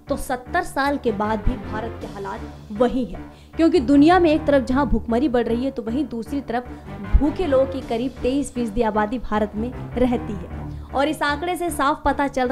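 No technical faults are audible.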